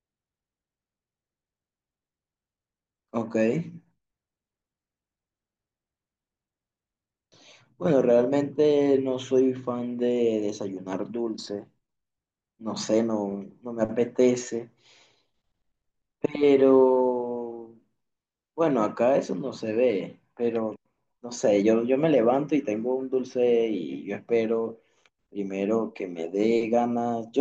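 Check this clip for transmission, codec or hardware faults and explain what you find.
Nothing stood out on listening to the speech in this recording.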